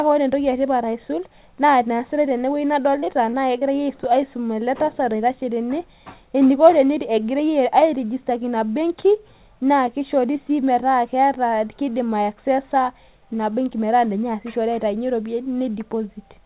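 From 3.0 to 3.64 s the speech breaks up with repeated packet loss (robotic sound): five short dropouts, the longest about 23 ms, each patched by stretching the previous sound. This gives a choppy texture with pieces missing. On a waveform, brief smeared repeats appear; on a spectrogram, blurred vertical seams. The whole clip stops at 4 kHz, consistent with a narrowband G.711 call path.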